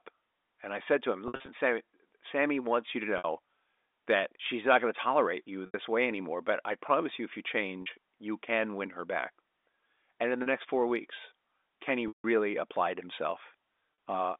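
Packet loss with pitch repetition occurs six times. Audio packets failed to arrive, and the receiver filled each gap by repeating the last pitch period, fading it out over about 50 ms. The first is at 1.28 to 1.48 s, just after "I said to him", where 140 ms is lost in scattered pieces over 200 ms, the longest run 60 ms. This sounds like a stuttering, buzzy hold. Brief held-tone gaps follow at 3.18 s after "wants you to" (60 ms) and at 5.66 s (80 ms). At 7.82 s, between "promise you if you" and "you can win her", a 40 ms loss adds a faint buzz. The longest, at 12.08 s, runs 160 ms, so the repeated tone fades toward silence before the sound cross-fades back. A final 40 ms loss comes at 13.94 s. The losses fit 20 ms packets. Throughout, the G.711 telephone coding confines the sound to the telephone band of roughly 250 Hz to 3.6 kHz.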